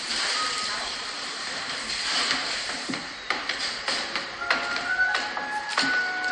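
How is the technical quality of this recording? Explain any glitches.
The quality is noticeably degraded by compression damage throughout.

Throughout, MP3 compression is likely at work. Nothing sounds above 10.9 kHz, and weak spectral detail flickers in and out, giving a watery, swirling texture. Unlike a plain low-pass filter, which only dulls the treble, this cut comes with that unstable shimmer. It fits a starved bitrate around 45 kbps.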